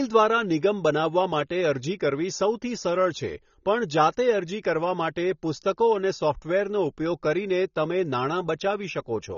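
Speech, with AAC compression damage throughout. Nothing sounds above 6.9 kHz, leaving it dull and smeared. This likely comes from a low-bitrate encode, fitting about 24 kbps.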